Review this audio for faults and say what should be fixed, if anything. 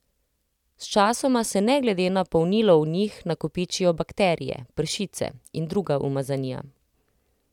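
No faults found; nothing needs fixing.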